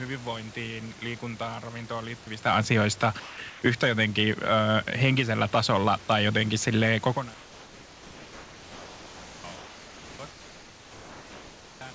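From 3.20 to 3.38 s, a short stretch of speech is cut away and replaced by steady hiss. The likely cause is sound dropped by the voice detector: the sender judged the sound to be background and stopped transmitting, so roughly 100 ms of real sound vanishes before the detector triggers again. On a waveform the speech envelope collapses abruptly into a flat, even band of noise. On a spectrogram the speech harmonics end sharply against a smooth, uniform wash.

Comfort noise in place of the background then appears four times: 3.50 to 3.62 s, 7.34 to 9.44 s, 9.56 to 10.19 s, and 10.31 to 11.81 s. In each pause the sender likely went silent, and the receiver synthesised noise shaped like the room background. That noise sits about 21 to 23 dB below the loud speech, about 2 to 3 dB quieter than the real room noise, and lacks its detail. On a spectrogram, the textured room noise turns into a featureless, evenly smeared band with hard edges at each boundary, all capped at 8 kHz by the call codec. 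On a waveform, the level drops slightly and becomes unnaturally steady.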